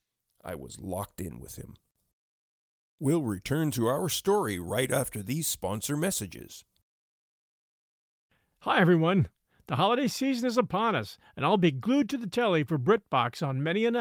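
Nothing stood out on listening to this speech recording.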